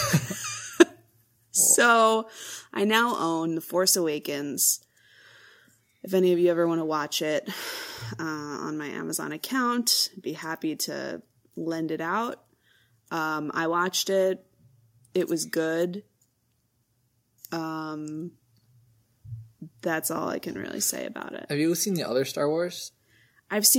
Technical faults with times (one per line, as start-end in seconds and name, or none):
0.80 microphone overload
0.82 microphone volume stepped down